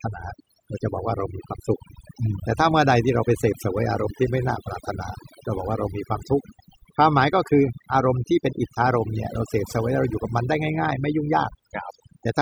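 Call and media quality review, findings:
Overdone noise removal, whole clip: background dropped and broken into twinkly specks. Denoiser set too hard, dropping bands near its noise estimate plus quiet speech detail.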